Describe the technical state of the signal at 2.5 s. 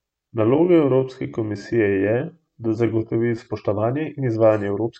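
At 2.5 s the speech sits inside a time-stretched section from 0.0 to 3.5 s, slowed to about 0.69× with pitch held, likely by repeating short pieces. It drags until "in izvajanje", and a spectrogram shows elongated harmonics with repeated waveform segments.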